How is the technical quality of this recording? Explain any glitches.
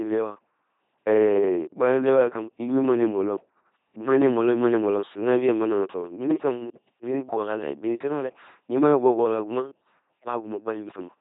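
The quality is poor. An LPC-10 vocoder runs through the whole clip. Each moment is rebuilt from a ten-pole vocal tract filter, driven by either a pulse buzz or noise. Nothing in between survives. The speech sounds heavily robotic and buzzy, with hiss where voicing is misjudged. Nothing remains above 3.8 kHz. The sound fits a 2.4 kbit/s vocoder.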